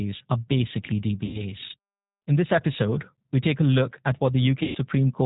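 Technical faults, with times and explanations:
Throughout, G.729 codec: band-limited, slightly rough and synthetic speech with nothing above 4 kHz, from 8 kbit/s rebuilding via vocal-tract filter, pitch predictor and sparse pulses.
1.25–1.41 s and 4.63–4.78 s, VoIP packet loss concealed by the speech codec: after "are basically" and "look at", sound smears into a fading buzzy tone or coloured noise as the decoder extrapolates over about 90 ms, then 120 ms, of missing audio.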